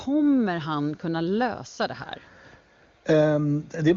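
Nothing goes wrong anywhere in this bit of speech; it comes over an AMR wideband (HD Voice) link, so the highs just stop at about 7.2 kHz, which is simply how that codec carries sound.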